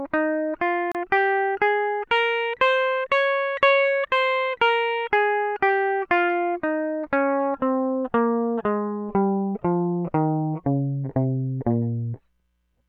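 A gap at a join of encoded pieces opens at 0.92 s and lasts about 32 ms, to 0.95 s. Separately encoded segments were spliced untrimmed, so encoder delay and end padding leave a brief silence with smeared edges before the music resumes where it stopped.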